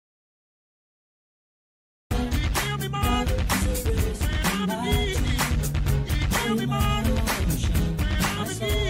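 The clip opens in dead silence, with no room tone or noise floor at all, and the sound only comes in abruptly at about 2.1 s, already mid-flow rather than starting naturally. That opening stretch is an audio dropout to silence that is already under way when the clip begins. The likely cause is a lost input, such as a disconnected device, a failed link or an accidental mute, while the recorder kept writing silence, so whatever happened before 2.1 s is missing.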